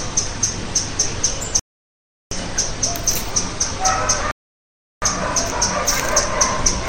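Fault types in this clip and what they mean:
rebuffering stall: playback halts into silence and then picks up exactly where it stopped, here from 1.59 to 2.31 s and from 4.31 to 5.02 s, each adding about 0.7 s. Unlike a dropout, no audio is missing. The sound is delayed, not skipped.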